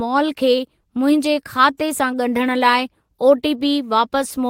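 Right from the start the sender's clock is running slow against the receiver's, by roughly 2 percent, so there's clock drift between sender and receiver through the whole speech clip. Because samples arrive a touch more slowly than they're played out, the jitter buffer keeps draining, and the receiver has to stretch things out to avoid running dry. You hear that as a faint unsteadiness in the pacing rather than any single obvious glitch.

From about 0.26 s to 4.19 s you get the knock-on effect: repeated timing corrections. The receiver keeps repeating tiny slices of audio to stay in step, always padding and never trimming, at uneven spacing. Altogether that adds roughly a tenth of a second and plays things out at 98 percent speed. Each repeat is small, so it comes across as slight hiccups and a tempo that drags a little rather than clear stutters.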